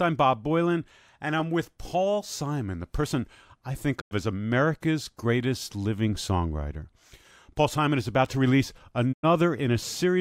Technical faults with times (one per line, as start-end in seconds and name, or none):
3.99-4.13 digital broadcast dropout
9.11-9.25 digital broadcast dropout